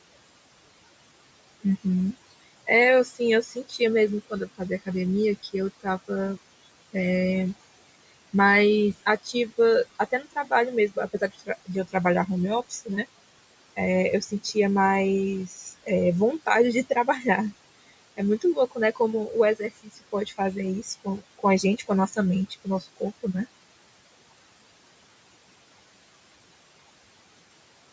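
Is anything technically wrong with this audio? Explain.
Yes, two related faults come from the noise suppressor.

Noise suppressor artifacts, throughout: the suppressor lowers whatever bands it judges to be steady noise, frame by frame, cutting the room noise by about 21 dB. The background drops away between phrases and returns under the speech.

Speech cut by the noise suppressor, at 1.61–4.88, 5.43–6.38, 9.03–13.06, 13.76–14.56, 15.47–15.89, 16.46–17.25 and 17.88–23.35 s: the suppressor mistook quieter parts of the speech for noise and pulled them down with the background, by about 9 to 21 dB. Consonants and word endings sound swallowed, briefly in most spans and for well over a second in total in the last.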